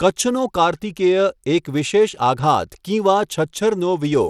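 From start to finish the speech carries plainly audible coding damage, most likely Bluetooth SBC compression at a low bitrate near 96 kbps. The sparse bit pool starves the upper sub-bands, so treble flickers and a gritty, aliased texture sits on the sound.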